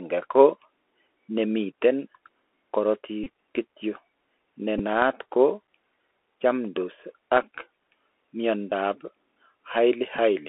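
From start to finish the speech passes through a Bluetooth CVSD headset codec. The one-bit-per-sample modulator, whose rate fits a 64 kbps link, cannot follow fast, loud high content with its adaptive step, and the line is confined to roughly 300 Hz to 3.4 kHz. The result is plainly audible: a thin, boxed-in tone, scratchy sibilants, slope-overload distortion on strong bright sounds, and a granular hiss beneath everything.

Four times the link between headset and phone drops voice packets, and the chip replays the previous packet's bits in their place. This Bluetooth headset packet repeat runs from 3.24 to 3.29 s, covering about 22.5 ms. It runs again from 4.78 to 4.81 s, about 11.2 ms, just before "naat ko". It is heard at 7.43 s, another 11.2 ms, and from 8.70 to 8.73 s, about 15 ms. Each repeats a frame every 3.75 ms, which gives a short, rough buzz near 267 Hz until clean packets resume.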